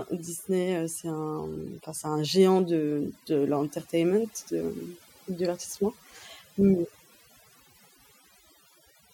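Overdone noise removal affects the whole clip. The reduction was set too aggressively, so frequency bands close to the estimated noise floor are cut hard or muted, taking quieter parts of the speech with them. Gaps fall to near silence with twinkling specks.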